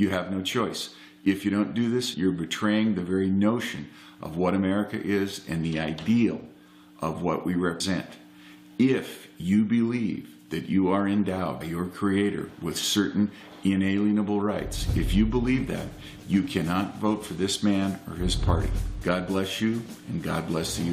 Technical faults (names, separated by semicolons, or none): compressed frames skipped